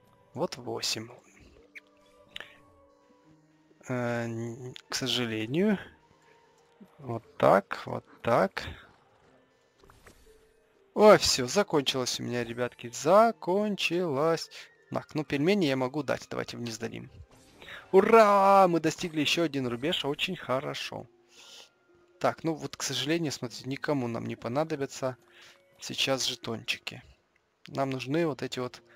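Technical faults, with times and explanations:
No technical faults can be heard anywhere in this clip.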